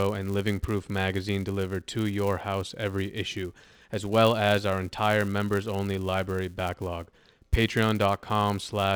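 A filter restarted on every block runs through the whole speech clip from start to finish. The filter discards its internal state at each block boundary and begins again from silence, so every block opens with a small transient. These repeat at about 172 Hz, which fits a 256-sample block, and merge into a steady buzz under the speech. It grows louder as the speech gets louder and fades back in the quieter passages.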